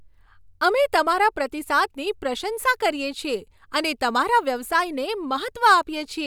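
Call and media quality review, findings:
Nothing stood out on listening to this speech clip.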